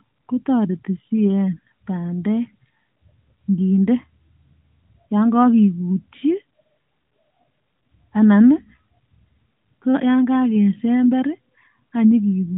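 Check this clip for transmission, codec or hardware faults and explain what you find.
No transmission, codec or hardware faults turn up in this clip.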